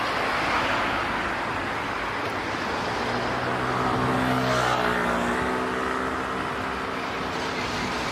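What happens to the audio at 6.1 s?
At 6.1 s the audio sits inside a stretch from 5.34 s to 7.57 s where everything runs about 5.7% fast and rises close to a semitone (roughly 96 cents), speed and pitch shifting together before snapping back to normal. This is most likely a drift correction step: clock-matching software abruptly changed the playback rate to rebalance its buffer, held that rate for a couple of seconds, then returned to the original speed.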